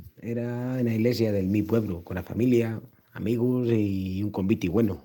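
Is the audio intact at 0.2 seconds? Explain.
No. At 0.2 s the audio sits inside a stretch of repeated timing corrections that runs from 0.10 s to 4.78 s. The receiver is cutting short pieces out of the stream so the speech plays at about 104 percent of its proper pace. The edits come at uneven intervals and all run in the same direction, so they are heard, if at all, as slight hiccups or an unsteady tempo. On a waveform each correction shows as a small splice where the envelope jumps. On a spectrogram it is a thin vertical seam where harmonics break off and restart slightly out of line.

The cause is clock drift between sender and receiver, present through the whole clip. The sender's clock runs roughly 4 percent faster, so the jitter buffer keeps filling up, and the receiver has to keep discarding audio to stay in step. That constant surplus is why the trimming recurs throughout rather than happening once. 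Seen across the full spectrogram, the drift appears as a scatter of these irregularly spaced seams rather than as any single gap.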